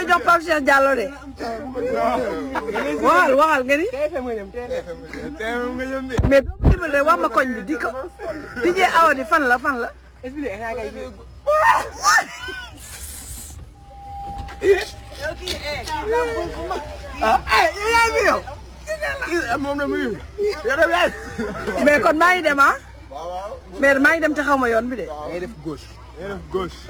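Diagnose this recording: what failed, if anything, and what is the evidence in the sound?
Crude rate conversion runs through the whole recording, introduced at the sample-rate conversion stage. A gritty, inharmonic fizz rides on the sound and grows with loud and high-frequency passages, sitting roughly 25 dB below the signal. The error pattern fits a conversion from 44.1 kHz to 48 kHz done by nearest-sample repetition with no interpolation filter. Duplicating samples on a fixed cycle produces a periodic timing error that generates shifted, inharmonic copies of the material.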